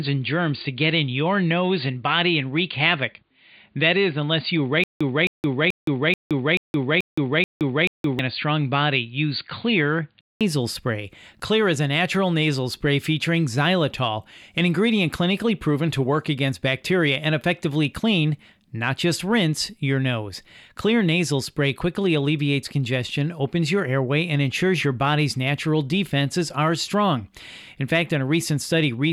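The clip is speech, and its first 10.41 s sound dull and boxy, as if an input switched to a poorer device: nothing reaches above 4.7 kHz, a faint new noise floor sits far below the speech, and loudness stays about the same. At 10.41 s a 0.2 s silence precedes a return to full bandwidth. On a spectrogram this shows as a flat ceiling at 4.7 kHz that lifts after the gap, most likely from the system moving off a narrowband microphone or headset call profile. Inside that stretch, from 4.84 s to 8.19 s, there is a stutter with silent gaps: a 0.26 s fragment plays eight times, each followed by 0.17 s of digital silence, repeating every 0.43 s. The waveform shows identical blocks separated by dead-flat lines, and the speech that belonged in that interval is gone, likely because the stream stalled and replayed its last buffer on each retry.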